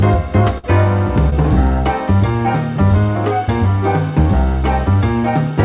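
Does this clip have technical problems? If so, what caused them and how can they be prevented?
Yes. There are two faults, both from packet loss on a call path that otherwise shows its G.711 mu-law character, with nothing above 4 kHz.

From 0.58 to 0.66 s there is a burst of packet loss. Several consecutive packets failed to arrive in time, so the receiver stretched the last sound it had for roughly 50 ms while turning it down. When real packets arrived again, playback skipped ahead, leaving a short stretch of sound missing. On a spectrogram this shows as a smooth, flattened band with repeated or frozen spectral structure that fades out, followed by an abrupt restart. In the waveform, a decaying, overly regular envelope gives way to a hard jump. More jitter-buffer depth, forward error correction and a less congested network path would prevent it.

From 1.30 to 1.34 s there is a short concealed packet loss. 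About 20 ms of audio never reached the decoder, and the receiver filled the hole from the preceding sound before blending back into real audio. It is heard as a brief smear or wobble. On a spectrogram it appears as a thin vertical slice where detail blurs or briefly repeats. In the waveform it is a small region of continued audio with a soft seam. Redundant packets or forward error correction on a steadier connection would keep these from reaching the listener.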